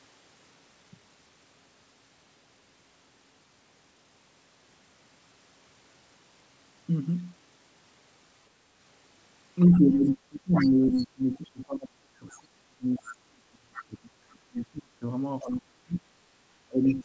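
From 9.66 s to the end of the clip at about 17 s, the speech is suppressed in double talk. The level sinks, and at its deepest it falls by around 30 dB. Syllables thin out or drop away. This is likely an echo canceller that heard both sides at once, could not tell its own talker from the loudspeaker echo, and turned everything down.

Starting at 9.71 s and running to 13.83 s, the other side's voice leaks through underneath. It sits about 15 dB below the main speech. Two shorter scraps follow. One runs from 15.41 to 15.45 s, about 25 dB down. The other runs from 16.84 to 17.0 s, about 20 dB down. This is likely loudspeaker sound that the echo canceller failed to remove from the microphone. All of it is heard through a G.722 call path with nothing above 8 kHz.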